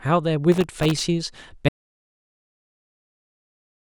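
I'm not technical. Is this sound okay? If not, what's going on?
No, there are two problems. From 0.52 to 1.03 s there's processor overload crackle. The computer couldn't keep up, so dozens of tiny slices of the speech, each just under a millisecond, came out as silence. That rapid stutter is the gritty crackle you hear.

Then at 1.69 s the speech cuts off completely and stays gone to the end. That's an audio dropout to silence, with no background sound left at all. It's likely the input was lost, from something like a disconnected device or a dropped link.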